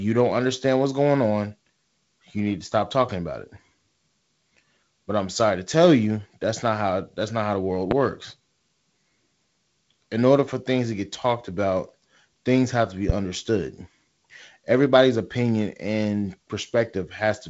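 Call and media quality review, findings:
Loud pop, 7.91–7.94 s: single sharp thump well above the speech, which continues underneath. Likely a voltage step from a plug, switch or static, shaped by downstream circuitry; G.722 band limit near 7.7 kHz audible throughout.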